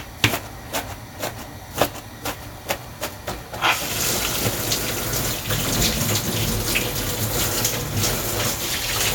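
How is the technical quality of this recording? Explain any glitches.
The recording's signal holds steady throughout, with no audible glitches, dropouts or interruptions anywhere in the audio.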